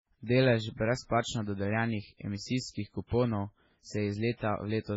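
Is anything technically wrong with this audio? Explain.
Yes. Throughout the speech, the sound has heavy damage that points to MP3 compression as the likely cause. Nothing remains above 7.6 kHz, and weak spectral lines flicker between frames, producing a watery, swirling texture and smeared consonant attacks, which fits a very low bitrate around 16 kbps.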